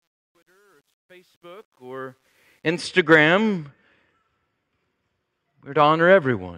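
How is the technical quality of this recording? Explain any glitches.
The speech has one real flaw, at the start. From 0.0 to 2.88 s, as the clip fades in, there is truncation distortion on a fade. The gain stage drops low bits without dither, which fits about 10-bit resolution, so near silence the waveform collapses into coarse square steps. From 0.0 to 1.96 s the sound is gritty. Dropouts or gate chatter would not behave this way. The grit tracks the level and clears as the fade-in completes at 2.88 s.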